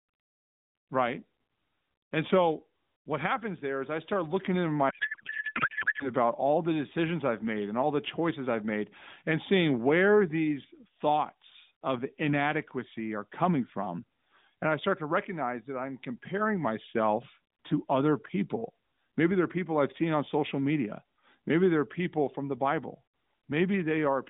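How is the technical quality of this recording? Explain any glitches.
The recording carries one clear glitch, a codec payload misread, heard over a narrowband AMR mobile line. That line passes roughly 150 Hz to 3.7 kHz, with light coding damage that fits a 12.2 kbps mode. From 4.90 to 6.11 s, right after "I start looking into", the speech turns into garbled noise and warble that barely tracks it. Clean speech returns at "all the decisions I've". The sender packed its AMR frames octet-aligned. The receiver unpacked them as bandwidth-efficient. So every field landed in the wrong bit position, and the decoder synthesised nonsense from it.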